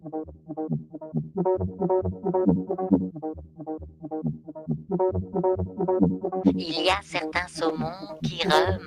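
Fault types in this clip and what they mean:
Noise suppressor applied to music: A speech-tuned suppressor mistakes this music's sustained parts for noise, so held notes and tails sink and the level swings by roughly 15 dB.
Sound cut by the noise suppressor: Held and decaying music sinks by up to about 15 dB in six brief stretches, while sharper attacks mostly get through.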